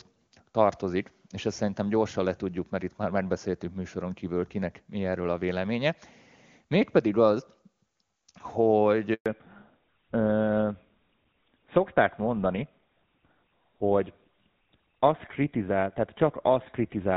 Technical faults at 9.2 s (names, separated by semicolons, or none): handover gap; fallback to narrowband